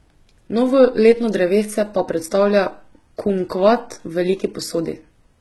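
Throughout the speech, the upper spectrum seems to have been rebuilt rather than coded, likely by HE-AAC compression at a low bitrate around 16 kbps. Nothing survives above about 11.8 kHz, and the treble below that is synthetic, so s sounds come out gritty, metallic or lispy.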